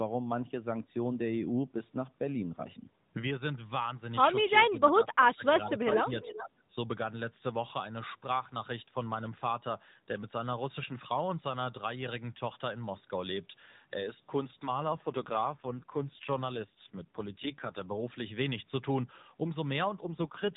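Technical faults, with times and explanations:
6.47–6.6 s, speech suppressed in double talk: the speech dips sharply, by roughly 15 dB at its deepest, for a brief stretch of about 150 ms before recovering. This likely happened because both ends were talking at once. The echo canceller could not tell the local talker apart from the returning loudspeaker echo, so it pulled the whole signal down.
14.88–17.87 s and 19.98–20.56 s, AMR rate drop: the band stays narrow and unbroken with no gaps, but the speech turns rougher, buzzier and more synthetic, then recovers between the two stretches and continues degraded to the end. The texture fits the AMR narrowband codec dropping from its 12.2 kbps mode to around 5.9 kbps. With fewer bits, the vocal tract model is driven by a coarser pulse excitation. Outside these spans the codec runs at 12.2 kbps with only light damage.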